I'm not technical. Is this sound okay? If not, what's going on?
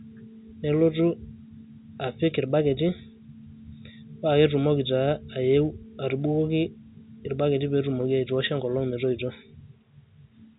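Yes, this sound is okay: it has the narrow quality of an ordinary phone line, which is normal here, and nothing has gone wrong.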